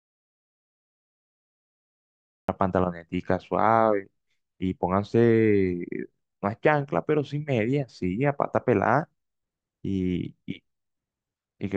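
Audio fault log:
0.00–2.48 s, audio dropout to silence: the clip opens in silence with no room tone, and speech only appears once the input returns at 2.48 s, so anything said earlier is missing. The likely cause is a lost input, such as a disconnected device or failed link, while recording continued.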